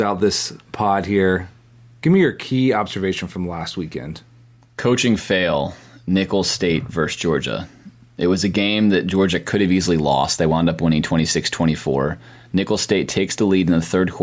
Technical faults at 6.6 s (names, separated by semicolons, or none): gain pumping